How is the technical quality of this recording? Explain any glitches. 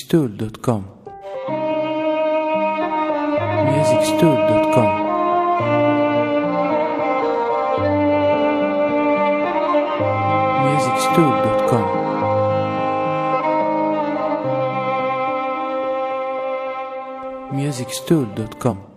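Two brief glitches interrupt the recording. Damaged data in a compressed stream occurs at 1.44–1.49 s and again at 18.67–18.73 s. Corrupted bytes there make the decoder misread frames and lose sync until it finds the next valid header, producing a short chirp or blip each time.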